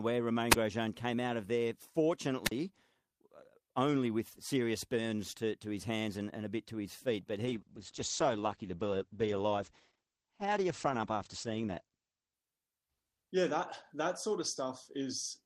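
At 0.51 and 2.44 s there's a wireless microphone squelch dropout: the radio link fades, hiss swells, and the receiver mutes for about 34 then 45 ms. From 7.46 to 13.41 s a call bitrate drop sets in, muffled and watery, treble gone above 8 kHz for about 4.4 s, which fits Opus falling from around 32 to 10 kbps.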